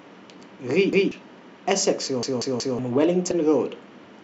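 At 0.93 s and again from 2.23 to 2.79 s, the speech stutters with a repeated buffer: playback ran out of fresh audio and replayed the last block, a piece of about 186 ms, which fits an 8192-sample buffer. It plays twice at the first spot and four times at the second, with a hard join at each restart, and roughly 200 ms and then half a second of speech never arrive.

At 3.30 s, compressed frames are skipped. The decoder drops a short run of frames and the speech jumps ahead by about 50 ms. Unlike the buffer repeats, nothing is heard twice.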